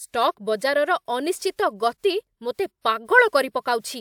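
Listening to this speech recording, nothing stood out as a technical problem.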